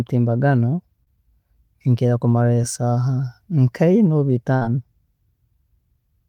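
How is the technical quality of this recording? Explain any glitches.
The speech has three packet-loss glitches; each shows up as a brief gap the receiver patched over.

Short concealed packet loss occurs at 1.03–1.18 s and again at 2.62 s. The receiver extended the preceding sound to cover the missing audio, about 20 ms and then 10 ms, and blended back in, leaving a short smear or wobble.

A burst of packet loss at 4.56–4.62 s removes about 60 ms. The receiver held the last sound for roughly 50 ms while fading it, heard as a brief buzz or hiss, then resumed with that stretch of speech gone.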